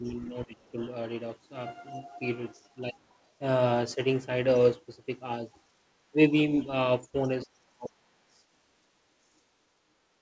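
From 0.0 to 0.77 s the speech dips by up to about 15 dB for around half a second in total. This is speech suppressed in double talk, likely because the echo canceller turned down both talkers while they overlapped. Unlike packet-loss dropouts, the dips follow the other side's talking.

At 0.05–0.12, 2.92–3.16 and 7.23–7.29 s, a faint second voice at about 35 dB below the speech slips in. This is the other side's voice leaking through, likely residual loudspeaker echo the canceller missed. It is a voice, not noise.

From 7.44 to 8.17 s a deeper suppression cuts the speech by up to about 35 dB, again likely from double talk. Nothing above 8 kHz is present, consistent with the G.722 call path.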